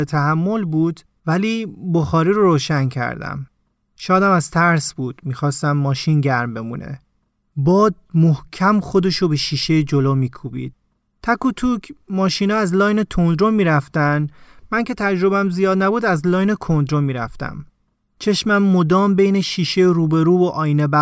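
A short stretch of speech, and there's nothing technically wrong with it that stands out to the ear.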